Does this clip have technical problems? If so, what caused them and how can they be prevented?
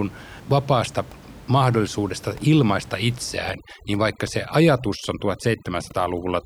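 Yes. Right after "vapaasta mahdollisuudesta ilmaista", at 3.35 s, overdone noise removal kicks in and stays to the end at 6.45 s. The room noise sits about 21 dB under the speech, and the reducer was set so hard that it pulls individual frequency bands down wherever they come near its noise estimate. The quiet parts of the voice go with it. The background drops and breaks up into twinkly specks. To prevent it, back off the reduction amount or set a floor on how far bands can be cut.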